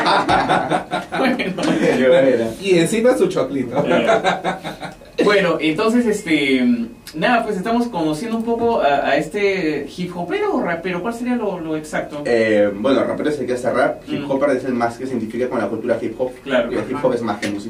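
At 1.68 to 1.70 s a single loud pop stands about 10 dB above the sound, which carries on underneath without a gap, unlike a dropout; likely a voltage pulse.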